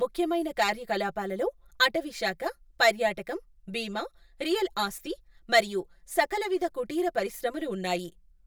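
From start to finish the speech sounds hollow and phasey, as if heard down a tube, with a thin colouring that never changes. This is channel delay (comb filtering). One channel arrives a few milliseconds late, around 5 ms, and when the two are folded to mono the shared content cancels at evenly spaced frequencies. The first notch sits near 100 Hz, and further notches follow at regular intervals through the spectrum.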